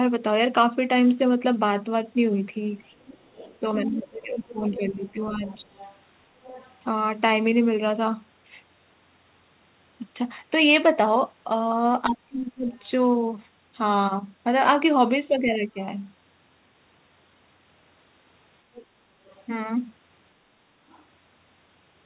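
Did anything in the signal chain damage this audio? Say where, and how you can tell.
Yes. Other side's voice leaking through, at 2.85–6.75 s, 12.75–12.89 s, 18.74–19.43 s and 20.89–21.03 s: in the call-processing stage, a faint second voice sits roughly 25 dB under the talker, dropping to brief scraps about 35–40 dB down. It is likely loudspeaker playback reaching the microphone that the echo canceller failed to subtract.

Speech suppressed in double talk, at 3.6–5.81 s, 12.07–12.75 s and 15.29–15.78 s: the talker's level is pulled down by up to about 25 dB in the first two spans and about 10 dB in the third. The echo canceller, likely unable to separate near speech from echo, turned everything down. Within the call's narrowband path, the talker's voice itself stops at 4 kHz.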